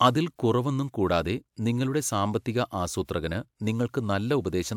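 No technical faults can be heard anywhere in this speech recording.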